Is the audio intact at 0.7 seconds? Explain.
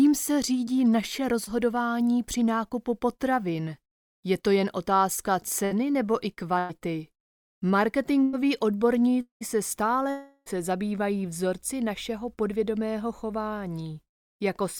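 No. A short concealed packet loss runs from 0.65 to 0.69 s: about 20 ms of audio failed to arrive in time, and the receiver bridged 13 ms of it by extending the preceding sound before blending back, leaving a brief smear or wobble.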